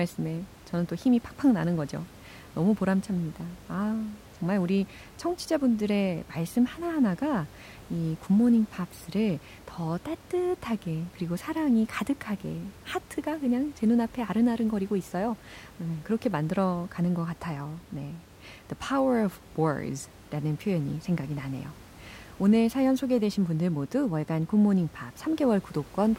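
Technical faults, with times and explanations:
No technical faults can be heard in this speech clip. Some background noise from the room sits about 23 dB below the speech, as part of the recording itself.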